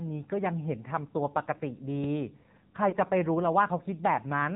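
AMR narrowband mobile codec, throughout: 8 kHz mobile coding removes everything above 4 kHz, and the plainly buzzy, synthetic texture fits a low mode near 7.4 kbps.

Lost AMR speech frames, 2.90 to 2.94 s: the decoder filled the gap with repeated pitch and vocal-tract settings at reduced gain, giving a brief dip or warble that fits a single lost 20 ms frame.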